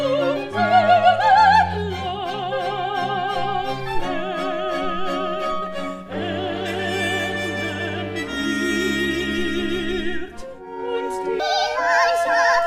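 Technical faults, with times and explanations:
11.40 to 12.67 s: section at the wrong speed. The last stretch plays 1.63 times faster than recorded. Pitch and tempo jump together, up by about ten semitones, so the sound turns high and hurried. This likely comes from that part being clocked wrongly during editing or playback.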